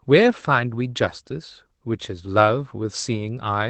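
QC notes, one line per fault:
No faults found in this speech clip; the call path's audio tops out around 8 kHz, which points to an Opus setting near 24 kbps.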